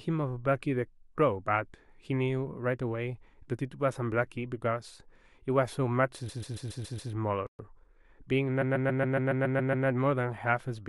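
From 6.28 to 7.11 s, repeated frames make the speech stutter. A block of about 129 ms plays six extra times. This adds 0.84 s.

At 7.47 s a playback stall cuts the sound off mid-flow. Silence lasts 124 ms, to 7.59 s. A likely cause is the player running out of data. It then resumes where it stopped.

Time-compressed catch-up follows, from 7.59 to 8.07 s. The player trims its backlog by cutting and cross-fading tiny slices. The speech runs at 1.25 times normal speed. Pitch stays the same.

From 8.61 to 9.86 s the repeated frames return. This time a block of about 139 ms plays nine extra times. The stutter is longer. It adds 1.25 s.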